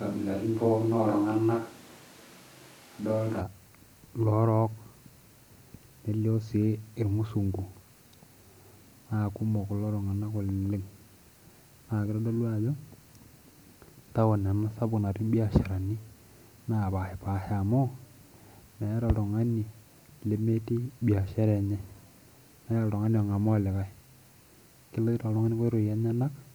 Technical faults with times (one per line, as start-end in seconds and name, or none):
0.00-3.40 switch to a distant microphone